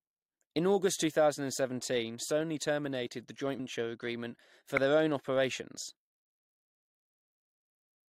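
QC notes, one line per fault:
3.58 s, compressed frames skipped: Between "terminated the joint" and "agreement for their own", about 150 ms of audio never plays. Whole compressed frames were dropped or rejected, so the decoder jumps ahead.
4.77 s, corrupt frame decoded: Between "agreement for" and "their own operations", a brief burst of misplaced energy peaks near -10 dBFS. A couple of frames carried flipped bits but were decoded anyway. Wrong gains and codes put energy at the wrong frequencies.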